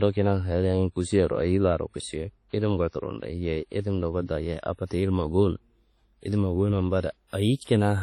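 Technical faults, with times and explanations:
Throughout, WMA compression: the speech rings and sounds washy, with a hiss that swells and fades with the signal and nothing above 14.3 kHz. This likely comes from a transform codec at a low bitrate, around 32 kbps. A spectrogram shows a hard ceiling and patchy gaps where weak components vanished.
4.85–4.91 s and 7.64–7.67 s, pre-echo: a short hiss runs 55 ms ahead of the attack before "ilimma gowuno", then 32 ms ahead of the second. The codec spreads noise scaled to each loud onset across the whole block. The waveform shows fuzz before each sharp edge.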